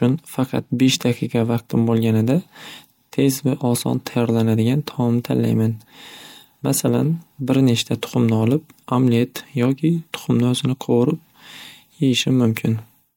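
Speech recording with no audible technical faults.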